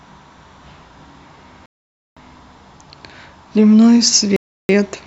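At 1.66 s the speech drops to dead silence for about 0.51 s, resuming at 2.17 s, and at 4.36 s it cuts out again for about 0.33 s, returning at 4.69 s. Both gaps fit a Bluetooth stall as the likely cause: interference delayed packets on the wireless link, the receiver's buffer emptied, and output halted until retransmitted data arrived. Each gap is a clean cut to silence and back, not a fade.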